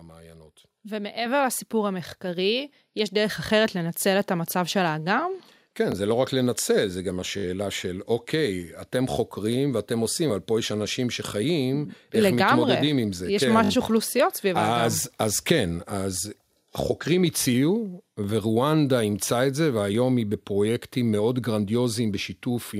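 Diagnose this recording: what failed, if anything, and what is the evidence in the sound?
Microphone volume stepped up at 1.26 s, a call-processing fault. Speech and background noise both jump by about 5 dB at once, with no fade, and stay at the new level. Because the noise floor rises together with the speech, the change happened at the input rather than in the talker's delivery. Automatic gain control in the call software judged the microphone too quiet and raised the device's input volume in a single step.

Repeated buffer at 5.92, 7.38, 13.64 and 18.24 s, a driver or buffer fault. Each event is a brief stutter with a hard join at every repeat. The events at 5.92 and 18.24 s are single repeats lasting about 20 ms. Those at 7.38 and 13.64 s run about 60 ms, consistent with three extra passes of one 20 ms block, which fits a 20 ms buffer. Fresh audio missed its deadline, so the device replayed its last block, with essentially no sound lost.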